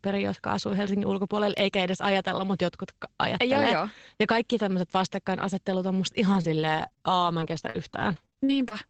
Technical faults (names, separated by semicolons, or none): repeated packet loss (robotic sound)